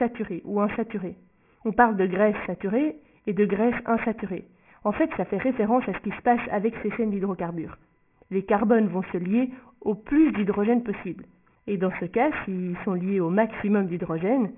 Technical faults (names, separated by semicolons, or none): aliasing